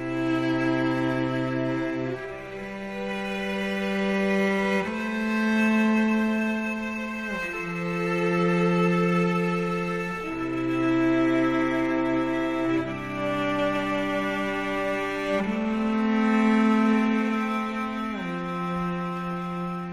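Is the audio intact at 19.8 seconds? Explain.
Yes, the audio at 19.8 seconds is intact, with no fault to be heard at that moment.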